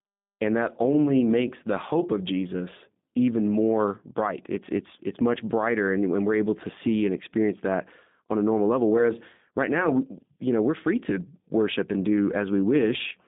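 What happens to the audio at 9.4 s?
At 9.4 s the speech carries G.729 codec damage, present throughout: resynthesised from a vocal tract model and sparse pulses, it sounds rough and synthetic, with the spectrogram empty above about 3.8 kHz.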